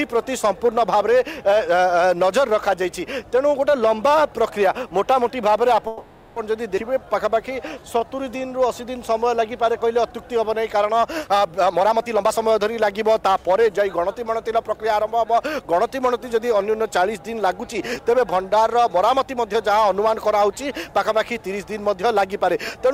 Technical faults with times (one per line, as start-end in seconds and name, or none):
5.87-6.39 call audio freeze
6.76-6.80 skip ahead
6.91-8.44 jitter buffer slow-down
11.57-14.94 jitter buffer speed-up